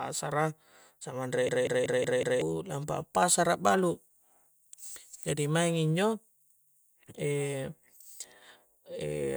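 From 1.49 to 2.42 s, a machine-gun stutter repeats one 0.19 s fragment five times: a system hang loop, cycling a frozen ring buffer that fits 8192 samples.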